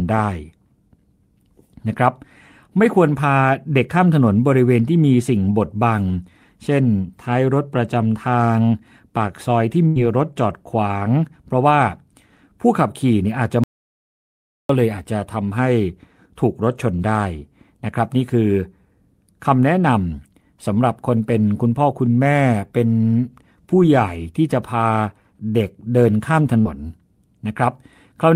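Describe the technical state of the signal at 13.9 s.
At 13.9 s the speech sits inside an audio dropout to silence, 13.64–14.69 s, likely from lost input, leaving a flat, silent waveform and a blank spectrogram band.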